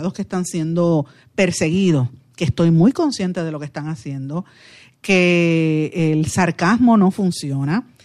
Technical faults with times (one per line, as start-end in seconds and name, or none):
none